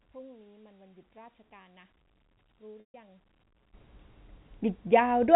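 From the start to 3.74 s the speech, summed to mono, sits about 25 dB down as a faint residue. One channel inverted is the likely cause, cancelling everything common to both sides. The waveform envelope collapses until level returns.

At 2.80 s, 140 ms of audio drops out, which fits seven 20 ms packets. This is packet loss with pitch repetition: the last pitch period loops as a buzzy held tone, fades to silence, then cross-fades back at 2.94 s. The spectrogram shows frozen, flat harmonic stripes; the waveform shows identical repeating cycles shrinking in height.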